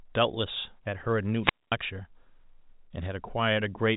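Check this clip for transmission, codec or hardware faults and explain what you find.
One transmission fault stands out: a wireless microphone squelch dropout from 1.41 to 1.75 s. The telephone-band G.711 coding, which fits 64 kbps A-law, stops near 3.8 kHz and adds at most faint damage of its own.

Wireless microphone squelch dropout, 1.41 to 1.75 s. The analogue FM link from the microphone weakens until the receiver's squelch judges the signal too poor and shuts the output. Hiss briefly swells, then the speech falls into a near-silent gap of about 226 ms before it comes back.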